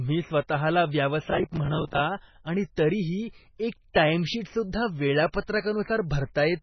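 From start to finish the speech has a watery, swirling quality, with heavy codec damage and nothing above 6 kHz, so sibilants lose their edge and turn metallic. This is likely MP3 compression at a very low bitrate, which the sound suggests is around 16 kbps. Short of bits, the encoder discards weaker frequency lines that then flicker on and off between frames, and it cuts the treble at a fixed point.

At 5.32 s a brief hiss of about 17 ms comes just ahead of a sharp attack, which arrives softened and smeared. This is pre-echo. The codec spreads its quantisation noise across a whole transform block, so when a loud onset falls late in that block, noise sized for the loud part also fills the quiet stretch before it.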